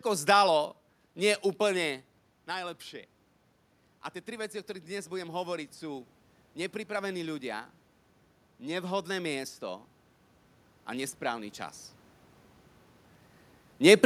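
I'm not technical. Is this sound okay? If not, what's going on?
No. From about 4.25 to 6.11 seconds there is automatic gain rising: the volume control found the input too quiet and gradually turned itself up, so the voice and room noise swell together over nearly two seconds, settling just before "nepripravení ľudia".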